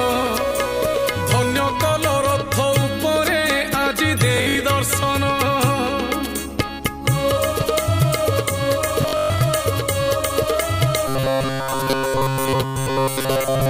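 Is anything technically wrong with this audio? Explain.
Yes, there are two kinds of fault.

Bluetooth stutter at 4.38–4.55 s and 9.02–9.41 s: audio arrived late or was lost, so the receiver replayed its last buffer. Gaps total 128 ms and about 235 ms, with repeat runs up to 64 ms and 128 ms, heard as a machine-gun rattle before the sound resumes further along.

Robotic sound from repeated short buffers from 11.08 s to the end: the audio becomes a rigid, metallic buzz at 134 Hz throughout, likely from a roughly 7.5 ms buffer replayed over and over while the real audio is skipped.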